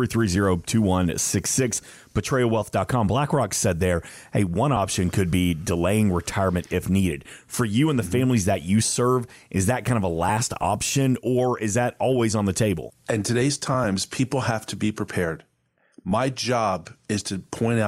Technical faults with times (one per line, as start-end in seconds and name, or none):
none